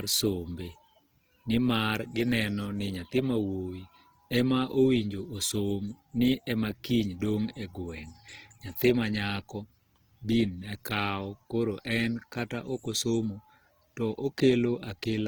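Throughout the speech, plainly audible Opus compression is the likely cause of a rough, grainy texture rather than swirling. The sound fits CELT mode at a low bitrate near 16 kbps. A spectrogram shows bands filled with noisy detail up to 20.5 kHz, with few holes.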